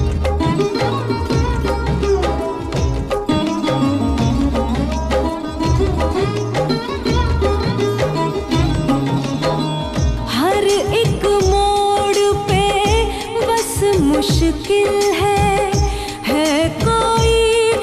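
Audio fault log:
No faults were heard anywhere in the audio. Nothing in it calls for a time or range to be marked.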